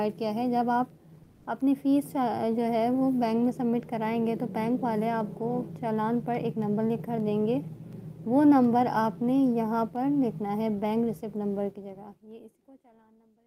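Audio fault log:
1.23–1.45 s, comfort noise in place of the background: for about 220 ms the real background, sitting about 30 dB under the loud parts, turns into flat, featureless hiss roughly 5 dB quieter. The likely cause is discontinuous transmission, like Opus DTX, where the receiver patches the gap with synthetic noise.
11.64–13.47 s, truncation distortion on a fade: as the fade-out's level sinks, the waveform collapses into coarse steps with no dither, which fits a 12-bit stage. It gets gritty, and from 12.94 s it is at its worst.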